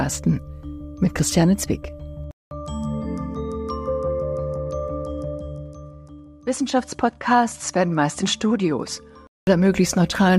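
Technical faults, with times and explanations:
2.31–9.47 s, input switched to a poorer device: the recording input likely changed to a lesser microphone. After a 200 ms silence the sound drops about 5 dB, loses everything above 11.4 kHz and gains its own noise floor about 50 dB below the signal, sounding duller until it clears.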